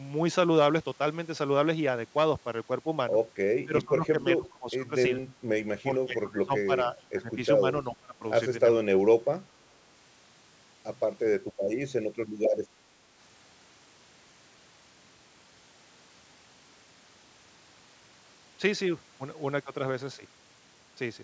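Between 3.64 and 9.31 s the speech keeps ducking out at 3.64–4.16, 4.37–4.91, 5.88–7.37, 7.60–7.64, 7.90–8.23, 8.73–9.03 and 9.21–9.31 s, dropping by up to about 30 dB. That's likely speech suppressed in double talk: the echo canceller treats the talker as echo and clamps down.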